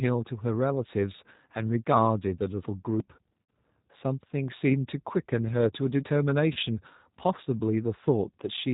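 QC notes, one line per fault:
Throughout, G.729 codec: the speech is rebuilt at 8 kbit/s from a vocal tract filter, a pitch predictor and sparse pulses, so it sounds rough and slightly synthetic. The spectrogram shows nothing above 4 kHz, with grainy, smeared harmonics.
3.0 s, dropped buffer (overrun): an abrupt jump in the sound, as if around 70 ms of audio is simply missing. The likely cause is samples not being read before the hardware overwrote them. The waveform shows a hard discontinuity with no silent gap.
3.43–3.49 s and 6.53–6.58 s, VoIP packet loss concealed by the speech codec: about 60 ms and 30 ms are lost, which fits two packets and then one. The decoder stretches its last pitch and filter into a fading buzzy tone or coloured noise. The spectrogram shows flat, repeated harmonic bands decaying, and the speech stays weak briefly afterwards.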